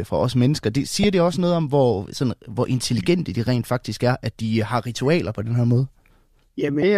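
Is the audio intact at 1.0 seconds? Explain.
No. Damaged data in a compressed stream hits at 1.03 s. Corrupted bytes there make the decoder misread the frame, lose sync and hunt for the next valid frame header, which leaves a brief glitch, a chirp, squawk, click or short hole, cutting into the speech.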